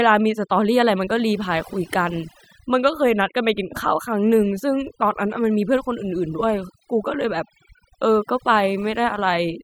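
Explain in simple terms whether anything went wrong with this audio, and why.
Something did go wrong: overdone noise removal, present from start to finish. A noise-cleaning tool was pushed too hard, so it shut off narrow slices of sound near the hiss level, taking quiet bits of speech too. Pauses fall almost silent with twinkling, warbling specks.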